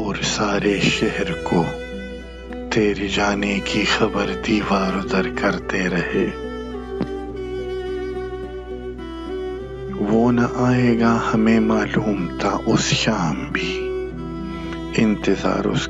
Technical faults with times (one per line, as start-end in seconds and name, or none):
0.00-15.89 mains hum